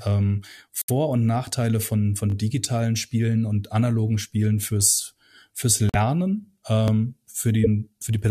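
At 0.82 s the speech drops into silence until 0.90 s. This is a corrupt frame muted fault: damaged compressed frames were rejected by the decoder and replaced with silence. The roughly 85 ms gap, which fits three consecutive frames, opens abruptly and leaves timing intact.

Just after "von von", from 2.30 to 2.34 s, a repeated buffer fault occurs. New audio arrived late, so the device replayed its last 20 ms buffer twice more. The hard joins give a brief buzzy stutter with no audio lost.

After "fürs fürs", a second corrupt frame muted gap runs from 5.89 to 5.96 s. The hole is about 64 ms, consistent with two rejected frames.

At 6.88 s the same 20 ms buffer plays once more, producing a short click-like repeat lasting until 6.90 s.

From 7.64 to 7.67 s a corrupt frame decoded fault appears. Flipped bits in roughly one frame were decoded anyway. Misread gains or codes placed energy at wrong frequencies for about 37 ms.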